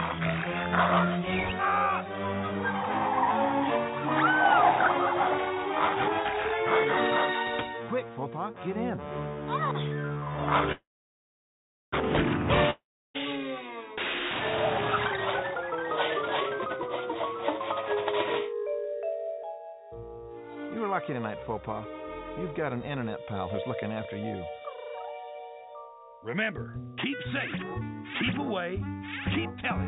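At 10.72 s a call audio freeze begins. The last sound is stretched into a fading buzz, then about 1.1 s of silence follows until 11.94 s. The audio resumes exactly where it stopped, so roughly 1.2 s of gap is inserted and nothing is lost. The likely cause is held-up packets draining the jitter buffer.

A long network dropout follows from 12.70 s to 13.16 s. After another fading buzz there is about 0.34 s of silence. When the audio returns, roughly 0.44 s of material is simply missing, likely because those packets never arrived.

Jitter buffer speed-up then trims the accumulated backlog. From 15.02 s to 17.60 s the sound runs at 142% speed, removing about a second. From 18.66 s to 19.81 s it runs at 110% speed, removing about 0.15 s. Short pitch-period slices are cut out, so the pitch holds while the sound is audibly hurried. The whole clip is band-limited to 4 kHz by the call codec.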